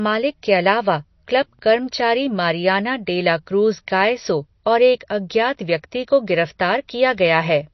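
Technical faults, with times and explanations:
Throughout, MP3 compression: the speech is watery and swirly, with s sounds turning metallic and chirpy and consonant attacks smeared. Nothing is present above 5.9 kHz, a hard treble cut that fits an encoder likely starved at around 32 kbps. Short of bits, it zeroes weak frequency lines that blink on and off between frames. A spectrogram shows a flat ceiling at 5.9 kHz and patchy, flickering holes below it. The waveform shows blurred onsets.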